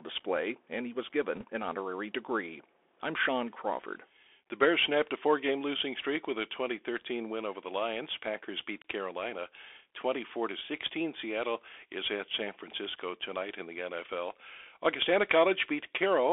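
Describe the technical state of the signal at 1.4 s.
At 1.4 s you're inside a short burst of bit errors on a Bluetooth voice link, running from about 1.35 to 1.44 s. Some of the one-bit up/down decisions got flipped in transit. Each bit only nudges the level by a small step and the error fades out, so there's no sharp click. Instead you hear a quick rushing, crackly noise over the speech, which fits an error rate of around one percent.

Underneath that, and present across the whole clip, is the Bluetooth CVSD headset codec. The sound sits in a narrow telephone-style band of roughly 300 Hz to 3.5 kHz, so it's thin with nothing up top. The codec's adaptive step can't keep up with fast, loud high content, which makes sibilants scratchy and leaves a grainy hiss under the speech. The damage is plainly audible and fits the standard 64 kbps headset link.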